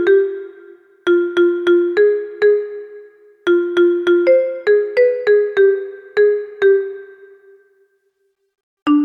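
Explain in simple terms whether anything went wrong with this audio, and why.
Nothing went wrong here: listening through the whole recording, there's no glitch, dropout or distortion to point to, so there's nothing that needs explaining.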